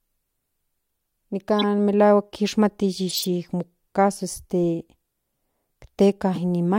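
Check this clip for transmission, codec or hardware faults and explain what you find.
Three faults are present, all corrupt frame decoded: at 1.59 to 1.64 s, 3.09 to 3.25 s and 6.34 to 6.38 s. In each, flipped bits in the compressed data were decoded anyway, so wrong gains and codes scattered energy across the wrong frequencies. The result is a brief squeaky, noisy blip in the speech, fairly loud and longest at 3.09 s, where several frames in a row are hit rather than a couple. On a spectrogram each appears as a short block of smeared, misplaced energy cutting across the speech harmonics.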